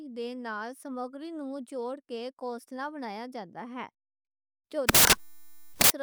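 A speech recording with one serious fault near its end. From 4.89 s to 5.9 s, the samples are built from the wrong bytes. The reader assembles each sample incorrectly, either shifted by a byte, with the byte order swapped, or with the wrong alignment assumed. The rapidly changing low-order bits end up as the most significant part of every value. The result is loud, harsh broadband noise across that whole second.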